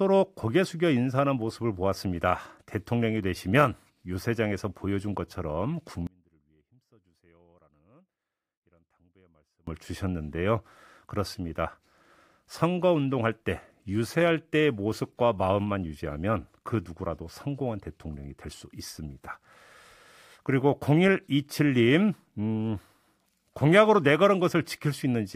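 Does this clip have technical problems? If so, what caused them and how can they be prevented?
Yes. At 6.07 s the speech cuts off abruptly in an audio dropout to a faint residue lasting 3.6 s, until 9.67 s, with only a faint leak of the signal roughly 30 dB below normal level left in the gap. The cause is likely a loss of the signal feed while the downstream path stayed live. The hard edges at both ends, with no taper, set it apart from a natural pause or a fade. Securing connectors and cables, and monitoring the feed during recording, would prevent it.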